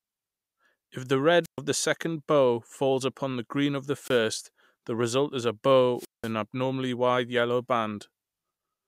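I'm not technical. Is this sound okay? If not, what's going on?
No. The wireless microphone's radio signal kept weakening until the receiver shut its output off, a wireless microphone squelch dropout. You hear a burst of hiss, then near silence, then speech returning, at 1.43–1.59 s, 3.98–4.20 s and 5.96–6.31 s.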